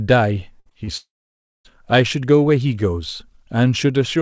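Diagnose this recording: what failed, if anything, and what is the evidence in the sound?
Network stage, burst of packet loss: from 0.60 to 0.68 s about 60 ms of consecutive speech packets failed to arrive in time. The decoder extended the last sound for roughly 56 ms, a held buzz or a fading hiss, then resumed later with that stretch gone.

Network stage, short concealed packet loss: two brief holes of about 20 ms each, at 0.70 to 0.73 s and 0.85 to 0.89 s, were patched by continuing the preceding sound and crossfading back. Each is heard as a quick smear or wobble in the speech.

Network stage, long network dropout: from 0.97 to 1.67 s nothing usable arrived, likely an interruption on the link. Concealment continues the last sound as a fading buzz or hiss, then about 580 ms of silence follows before speech returns, with roughly 680 ms of content lost. The surrounding audio is band-limited at 8 kHz, consistent with a G.722 call codec.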